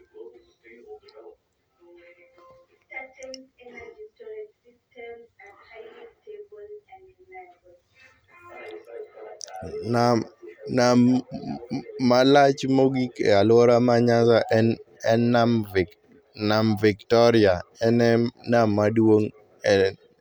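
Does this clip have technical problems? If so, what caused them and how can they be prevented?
No, no technical faults heard.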